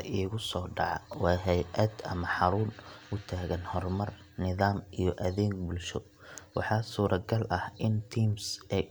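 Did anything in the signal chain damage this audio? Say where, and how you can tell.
Yes: clock drift buffer slips, clicking every 0.6 s from 0.53 to 8.33 s; likely mismatched clocks, roughly 700 ppm apart, forcing dropped or repeated samples.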